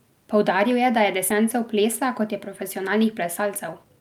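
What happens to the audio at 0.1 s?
Nothing goes wrong at 0.1 s; the audio is intact at that moment, with no dropout, click, distortion or other fault to be heard.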